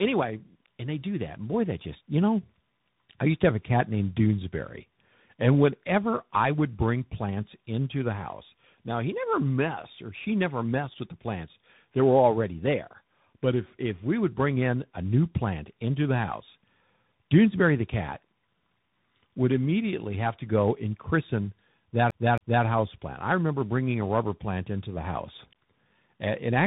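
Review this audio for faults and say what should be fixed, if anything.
Tandem speech coding runs through the whole clip. The audio passes an AMR-NB 12.2 kbit/s coder, a G.711 mu-law link and then a CVSD 64 kbit/s coder, so it is decoded and re-encoded at each border, and each coder builds on the previous one's damage. The result is rough, muffled and warbly, with nothing above 3.8 kHz. A single narrowband codec would share that bandwidth limit, but its grain would not be layered like this. To prevent it, keep the call in one codec end to end or transcode only once.

A CD stuck on one turn appears from 22.1 to 22.65 s, between "go and christen that" and "house plant I remember". A scratch sends the laser back so that a 272 ms slice repeats twice, with a brief mute at each jump. Its identical, evenly timed repeats set it apart from network dropouts, which conceal or gap irregularly. To prevent it, clean or replace the disc, or rip it with error-checking before use.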